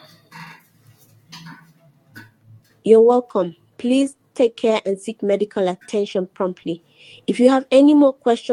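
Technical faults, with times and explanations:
Nothing stood out on listening to this recording.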